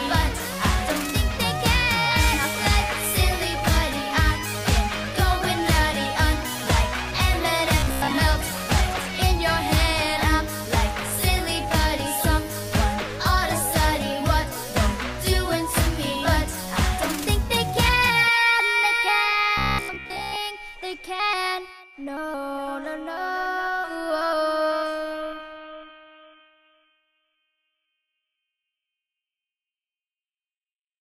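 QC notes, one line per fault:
7.80–8.11 s and 19.58–20.36 s: robotic sound from repeated short buffers. A rigid, metallic buzz near 66.7 Hz, likely from a 15 ms segment replayed in place of most new audio. The spectrogram shows even harmonic lines every 66.7 Hz, and the waveform shows a short cycle repeating.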